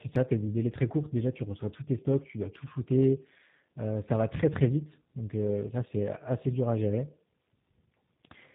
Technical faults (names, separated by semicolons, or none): tandem speech coding